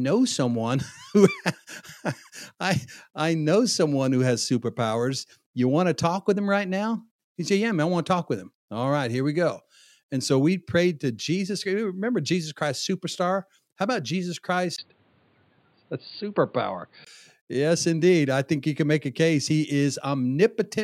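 From 14.76 s to 17.07 s the speech turns dull and boxy, losing everything above 4.7 kHz, after a 20 ms gap. A faint new background noise sits roughly 40 dB below, at unchanged loudness. This is likely an input switched to a poorer device.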